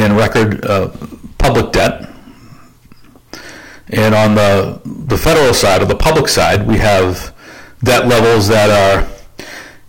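From start to finish, some stage in the chain is being driven about 29 dB beyond what it can pass, so hard clipping sheers the waveform flat wherever it tries to exceed that ceiling, which is around a fifth of all samples. Those squared-off tops spray harmonics high into the spectrum, and across the whole speech clip every loud syllable arrives wrapped in a harsh, buzzing fuzz rather than occasional crackle.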